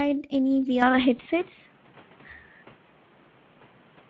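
Throughout this short speech recording the sound is noisy and hoarse, with plainly audible grit and a thin, hissy quality in place of clean treble. That is the Speex codec at work. This CELP speech coder leaves too few bits to model the excitation faithfully, so the fine structure of the voice is replaced by rough approximation. The degree of damage points to a middling setting, roughly 17 kbps. From 0.82 s to the end the character changes abruptly with no gap. The sound turns duller and boxier, nothing is left above about 3.8 kHz, the level shifts by a few decibels, and a faint new background noise appears underneath. The likely cause is an input switched to a poorer device, such as a second microphone or a headset's call profile, whose narrower band, different tone and own noise floor take over mid-recording. Between 1.17 and 1.22 s there is a brief stretched patch where the speech briefly stops sounding natural and fades before recovering. 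This is VoIP packet loss concealed by the speech codec. About 20 ms of audio went missing, which fits a single lost frame. The decoder filled the hole by extending its last pitch and filter with falling gain, and because each following frame builds on that guess, the distortion lingers for a moment after real data resumes.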